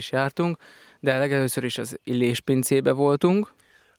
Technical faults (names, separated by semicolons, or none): none